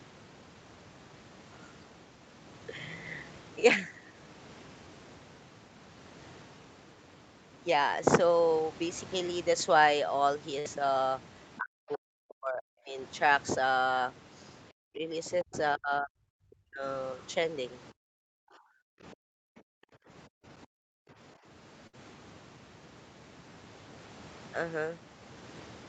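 At 10.59 to 10.67 s a burst of packet loss left a gap that the receiver covered by stretching the last sound for about 56 ms while fading it, then the speech resumes with roughly 60 ms missing.

From 11.59 to 12.97 s, 14.73 to 15.02 s, 15.43 to 16.84 s and 18.14 to 19.30 s, the speech repeatedly dips by as much as about 40 dB, thinning and breaking up in pieces over several seconds in total. This is likely speech suppressed in double talk: with both sides talking, the echo canceller turned down the near talker along with the echo.

From 19.61 to 21.10 s the background is gated by the echo canceller. While the loudspeaker played, the canceller clamped the microphone down by about 40 dB, so the room sound drops away for around a second in total before returning.

A second burst of packet loss at 21.87 to 21.95 s again has about 60 ms of sound continued and faded, after which the speech jumps ahead with about 60 ms lost.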